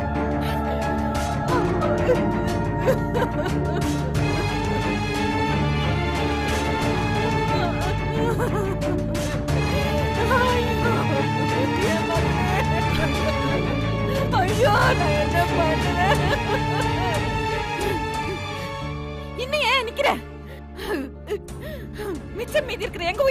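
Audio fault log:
Throughout, crude rate conversion: a gritty, inharmonic fizz trails loud and high sounds. Unfiltered linear interpolation, fitting 32 kHz to 44.1 kHz, leaves error some 35 dB down.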